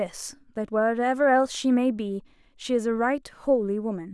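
No technical faults are audible.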